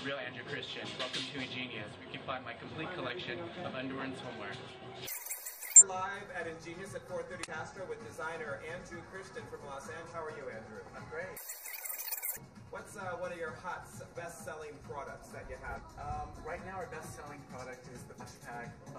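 At 5.76, 7.43, 10.08, 15.75 and 18.16 s you get short blips of about 50 to 65 ms each, classic damaged data in a compressed stream: corrupted bytes garble a frame, the decoder loses sync and glitches until it locks onto the next header.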